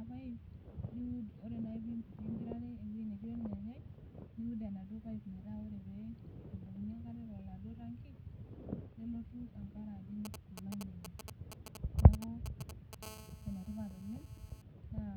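From 10.25 to 12.95 s there are GSM signalling bursts. A nearby 2G phone sends short groups of radio pulses, and the audio circuit rectifies them into a galloping dit-dit-dit of brief 217 Hz buzzes, nearly as loud as the speech. On a spectrogram they appear as intermittent vertical clusters of evenly spaced harmonic lines.

From 13.03 to 14.62 s a steady GSM phone buzz follows. The phone is now in a call, pulsing continuously 217 times per second, and the rectified bursts produce a hard, raspy 217 Hz tone about 18 dB below the speech. The spectrogram shows an unbroken comb of harmonics, and the waveform carries a regular pulse train.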